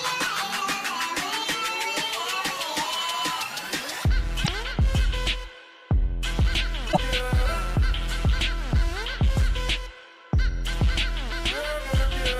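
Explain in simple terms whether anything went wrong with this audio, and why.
Two short glitches interrupt the sound, at 4.40 to 4.49 s and at 6.89 to 6.98 s, each under a tenth of a second. Both are damaged data in a compressed stream: part of the stored file was corrupted, so the player misread that stretch and had to find its place again. A simple dropout is just silence. Here each glitch comes out as a brief chirp, squawk, click or short hole before the sound continues.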